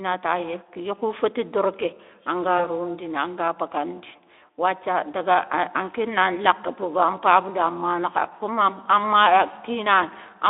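At 2.57 to 2.63 s, just before "rondini an ga", the speech briefly smears into a thin, buzzy hold that dips in level and takes a moment to recover its clarity. This is VoIP packet loss concealed by the speech codec. What sounds like a single 20 ms frame went missing, and the Speex decoder filled the gap by repeating its last pitch and spectral shape at reduced gain. Later frames then had to rebuild from that guess, so the weakness lingers past the gap.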